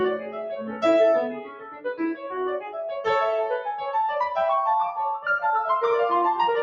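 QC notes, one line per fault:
Throughout: noise suppressor applied to music. A suppressor tuned for speech stays engaged on this music. It treats sustained tones, ambience and reverb as noise and pulls them down. Gain rides up and down by roughly 10 dB. Attacks pass while held material and tails sink. The result is audible pumping and a thinned, fluttering texture, because level follows the suppressor's guesses rather than the music.
0.18–0.84 s, 1.29–1.94 s, 2.15–2.32 s, 2.60–2.77 s: sound cut by the noise suppressor. In each span the suppressor mistakes the music for noise and ducks it harder than its surroundings. Drops reach about 9 dB, about 14 dB, about 10 dB and about 9 dB respectively. The deepest is at 1.29–1.94 s. Sustained and decaying parts lose level or end early. The two longer dips sound like the music sagging away, and the short ones like brief hollows.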